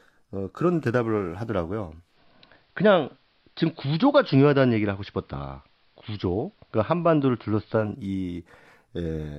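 A speech recording from a hybrid receiver shows digital radio blending to analogue between 1.98 s and 7.94 s. The digital stream dropped out and the set cross-faded over about 206 ms to the station's AM broadcast, then returned. During that span the treble is narrowed, as AM's narrow channel allows, a low hiss sits roughly 40 dB under the speech, and the level shifts by about 2 dB.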